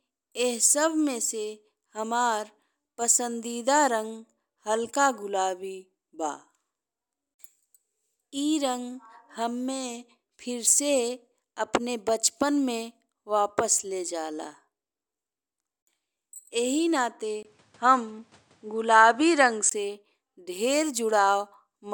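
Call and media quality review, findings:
Input switched to a poorer device, 17.43 to 19.71 s. 20 ms gap at the switch. Nothing above 10.4 kHz, so the speech dulls. Level shifts about 5 dB. New noise about 40 dB down. Likely a capture-device change, reverting at 19.71 s.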